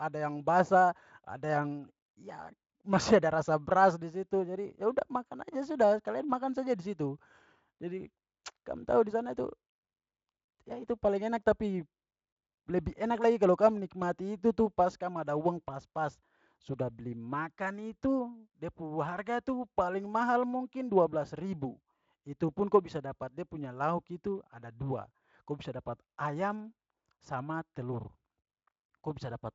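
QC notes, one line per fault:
The speech passes through a Speex stage whose sound fits a high setting of about 34 kbps, with content reaching up to 7.6 kHz and nothing above it, and no faults are present.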